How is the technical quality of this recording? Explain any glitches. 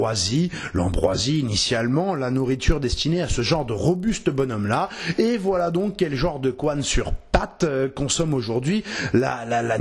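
The quality is compromised by one fault running through the whole recording. A resampler restarted on every block, apparently converting 48 kHz down to 24 kHz in separate 40 ms chunks, so each block edge lacks its true neighbouring samples and carries a small error. These errors recur at 25 Hz, producing a low, regular ticking buzz whenever sound is present.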